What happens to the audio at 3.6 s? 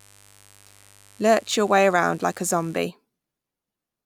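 Nothing goes wrong at 3.6 s: the speech carries on intact through that moment, with no dropout, click or distortion.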